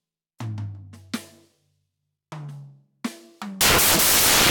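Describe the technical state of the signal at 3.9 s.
At 3.9 s the music is buried under samples built from the wrong bytes, from 3.61 s to the end. Misassembled bytes turn low-order bits into the large part of each value, producing loud, harsh broadband noise and a flat, dense spectrogram band.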